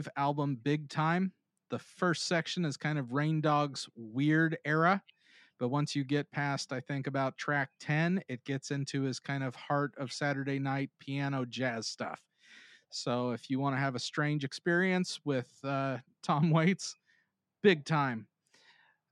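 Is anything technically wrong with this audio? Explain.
No, there is nothing technically wrong with this speech recording. No fault can be heard anywhere in it, so there is nothing to explain.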